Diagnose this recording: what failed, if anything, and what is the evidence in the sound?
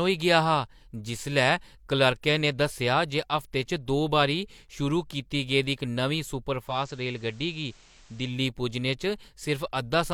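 Digital radio blending to analogue at the receiver: from 6.63 to 8.40 s it cross-fades over 158 ms to FM, with faint hiss and about 3 dB less level.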